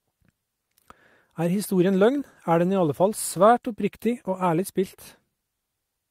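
Speech with a call bitrate drop from 2.21 s to 5.43 s. The encoder is starved of bits and codes the audio more coarsely, so it turns rough and watery. The roughness points to a fall from 64 to 27 kbps. It stays at its worst for about 1.9 s.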